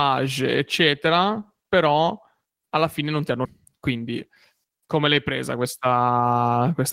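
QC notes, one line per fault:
3.45 s, skip ahead: right after "fine non ti hanno" the speech jumps forward with no gap, about 0.7 s lost as audio was dropped, in transit or by the overflowing jitter buffer, while later audio was already queued.
3.64–4.96 s and 5.57–6.15 s, jitter buffer speed-up: speech runs hurried at unchanged pitch, 7% then 9% fast, as the buffer trimmed pitch-period slices to shed excess delay.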